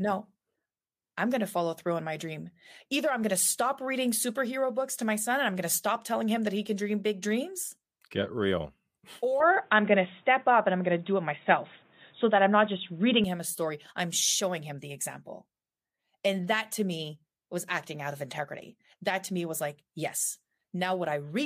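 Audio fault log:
9.40–13.24 s, input likely switched to a poorer device: sound turns dull, nothing above 3.8 kHz. Level shifts around 5 dB. New noise appears, roughly 40 dB down.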